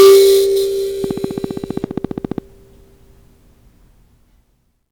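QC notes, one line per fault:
0.00–0.24 s, hard clipping: the opening of the music is driven about 8 dB past what the signal path can carry, so the waveform peaks are sliced flat instead of rounding over. Those squared-off tops add strong harmonics high in the spectrum that the music does not contain, giving the opening a harsh, fizzy edge. At this amount of overload, the distortion sits on all the loud material in that stretch, not just an occasional crackle.
1.04–2.39 s, train of clicks: about twenty sharp ticks of near-identical shape arrive at a steady rate of about 15 per second, evenly spaced, and stand out at around 5 dB above the music. The click rate does not follow the music, so the ticking reads as an overlaid mechanical pulse rather than part of the performance. The likely cause is interference from nearby equipment or a faulty connection or power supply.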